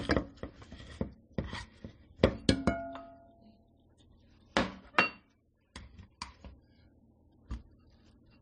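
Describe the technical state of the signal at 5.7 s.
At 5.7 s the sound is band-limited, as it is across the whole clip. Nothing is heard above 9.7 kHz. Two layers of coding damage sit together, with each codec's artefacts heard alongside the other's. The likely cause is transcoding between lossy codecs. The sound fits a low-bitrate MP3 being re-encoded as AAC-LC at a similar rate. The second encoder wastes bits on the first one's artefacts and adds its own. The lower cut-off survives.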